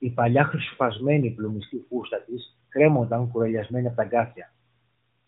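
Listening closely to this speech, nothing stood out as a technical fault; it simply carries the narrow, band-limited sound of a mobile call.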